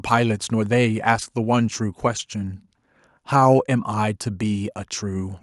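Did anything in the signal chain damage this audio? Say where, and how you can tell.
No, nothing along the chain seems to have harmed this speech recording, so there's no stage to point to and nothing to time-stamp.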